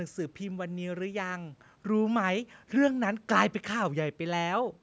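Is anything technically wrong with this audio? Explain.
No, nothing is technically wrong with this audio.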